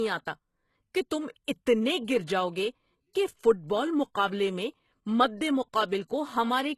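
From start to finish the speech carries plainly audible damage that points to HE-AAC compression at a low rate, likely around 16 kbps. Nothing sounds above about 12.3 kHz, yet treble is still present, because it is rebuilt from copied lower bands rather than coded. The s sounds come out gritty and metallic instead of dull, which separates this from a plain low-pass or narrowband codec that simply loses the top end.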